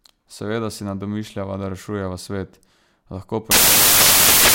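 A speech clip that breaks down near the end. From 3.51 s to the end, after "da rešujeva svet lahko", the audio turns into loud, harsh broadband noise. These are samples built from the wrong bytes. Misassembled bytes push the rapidly changing low bits into the top of each value.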